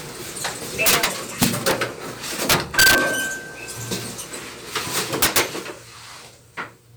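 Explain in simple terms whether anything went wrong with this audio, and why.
Integer overflow causes harsh cracks at 0.86–1.05, 1.42–1.71, 2.50–2.98 and 5.22–5.40 s: loud peaks exceeded the number range and wrapped to the opposite extreme instead of being limited.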